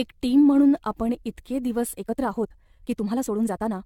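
From the start, the speech has a swirly, hollow, smeared quality with softened attacks. That's generation loss, likely from being re-encoded half a dozen or more times through AAC at around 96 kbit/s, each pass piling up fresh quantisation noise.

At 1.92 s it abruptly speeds up to 1.54 times the pace through to the end, while the pitch stays put. It sounds rushed, a time-stretched section where software likely dropped short slices to squeeze the length.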